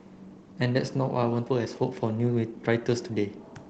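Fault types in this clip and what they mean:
Skip ahead at 1.46 s: roughly 300 ms of speech was dropped while later audio was already queued. Playback jumps straight to it with no filler, so the two sides of the cut join almost directly. The stream's delay shrinks by about the same amount.
Jitter buffer speed-up from 1.55 to 3.10 s: the buffer held more speech than its target. It trimmed short pitch-period pieces again and again, about 150 ms in total. The speech runs at 110 percent speed at unchanged pitch and sounds hurried.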